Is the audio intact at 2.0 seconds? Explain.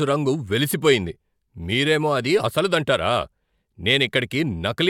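Yes, at 2.0 seconds the speech is intact, with no dropout, click, distortion or other fault at that moment.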